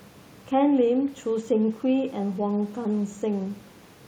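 Speech recording, no technical faults detected, with the room's own background noise sitting about 31 dB below the voice as part of the recorded environment.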